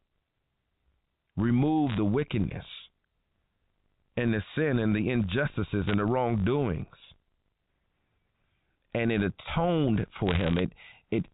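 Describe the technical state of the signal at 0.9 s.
At 0.9 s the speech carries a steady 50 Hz buzz from a filter restarted on every block. The fault runs through the whole clip. The filter loses its state at each block boundary and starts again from silence. Each restart leaves a small tick. Ticks arriving 50 times a second, which points to 20 ms blocks, merge into a buzz that rises and falls with the speech level. The telephone-band coding underneath shows little or no damage of its own.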